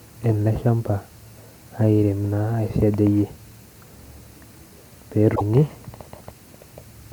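A short glitch cuts into this speech clip from 5.32 to 5.41 s, a burst of about a tenth of a second. It is damaged data in a compressed stream: corrupted or missing bytes leave the decoder unable to make sense of the frames at that point, so it misreads or drops them while it loses sync and hunts for the next valid frame header.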